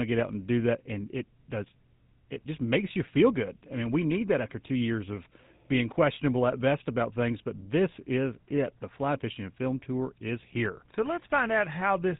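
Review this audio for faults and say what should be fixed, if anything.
GSM full-rate codec damage runs throughout the speech, plainly audible. The codec rebuilds the vocal tract from a coarse pulse-train excitation, giving a buzzy, gravelly roughness, and nothing passes above 3.8 kHz, which fits GSM full-rate at 13 kbps. Prevent it by capturing or transmitting over a wideband path rather than a legacy GSM voice channel.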